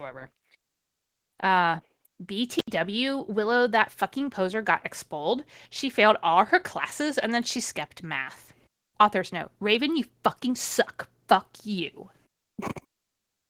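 Throughout, the speech sounds hoarse, slightly robotic and muffled, with plainly audible Opus voice compression damage. That fits hybrid coding at a low bitrate near 16 kbps, where a linear-prediction core plus a coarse upper band quantise the excitation roughly. At 2.56 s the sound crackles and drops out to faint hiss, returning by 2.71 s after roughly 82 ms of dropout. This is an intermittent contact, a loose cable or plug briefly breaking the signal path.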